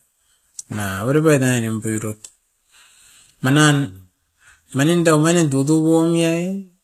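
It's a speech clip with HE-AAC compression damage running the whole way through, plainly audible, likely from a low-bitrate encode around 24 kbps. The treble sounds rebuilt rather than real, with s sounds going gritty and lispy, and nothing at all above about 14.9 kHz.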